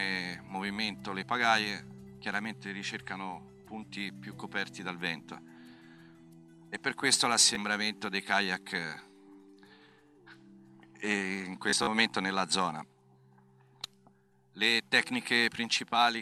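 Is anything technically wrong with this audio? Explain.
Yes, there is Bluetooth stutter, twice. At 7.55 s a brief gap of about 15 ms, which points to a single late packet, is filled by the receiver replaying its last buffer. From 11.70 to 11.87 s, about 87 ms goes missing across 174 ms, with the longest run 44 ms, producing a short machine-gun buzz. Unlike a dropout, the gaps repeat sound rather than going silent, and playback then resumes later, skipping ahead.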